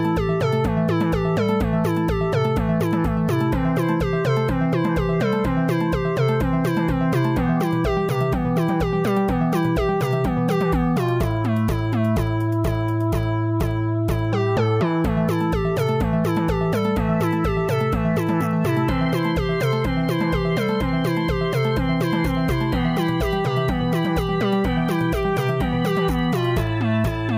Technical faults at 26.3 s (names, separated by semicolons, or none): none